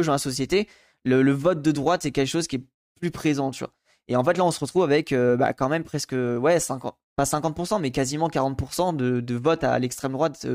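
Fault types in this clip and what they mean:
Listening through the speech, nothing stood out as a fault.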